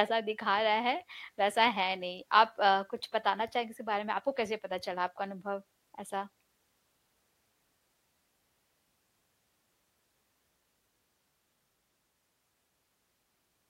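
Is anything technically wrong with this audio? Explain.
No, nothing technically wrong can be heard here.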